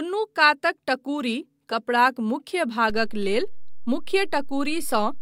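At 2.90 s the waveform's zero line shifts by a DC step of about -26 dBFS, the kind of jump a converter recalibrating or an offset input being switched in produces. The offset then holds for the remaining 2.3 s, to the end of the clip. The moment of the step is heard as a single low thump or click, while the speech itself carries on unchanged before and after it.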